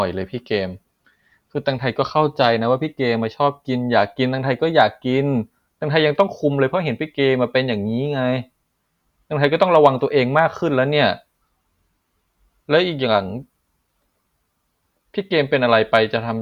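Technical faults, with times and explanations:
4.81, 6.20, 9.44–9.88, 10.39, 15.75–15.97 s, hard clipping: brief crackle on speech peaks, rougher at 9.44–9.88 s, as overload by up to about 3 dB flattens the peak tops.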